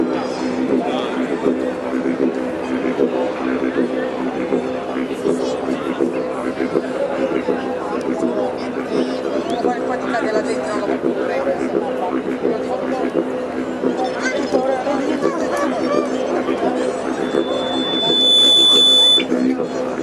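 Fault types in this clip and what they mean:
Loudspeaker feedback squeal: a microphone is picking up the loudspeaker it drives, and at about 3.5 kHz the loop gain passes one, so that frequency feeds on itself. From 17.22 s a single piercing tone swells over roughly a second to around 10 dB above the signal and holds until 19.28 s. The steady pitch and the self-building rise set it apart from a hum or whistle that stays at a fixed level throughout.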